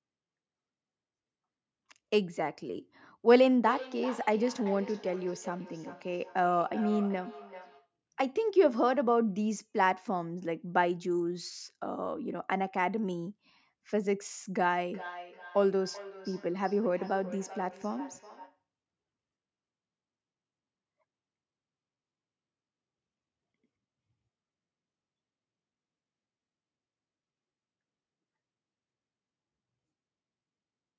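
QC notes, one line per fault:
3.31–7.93 s and 14.87–18.63 s, feedback echo between two devices: a second device in the room replays the call, and the microphone picks it up again beyond its own echo canceller's reach. The speech returns at a steady interval of roughly 0.4 s, thinner and more ringing, peaking about 14 dB and about 15 dB below the speech.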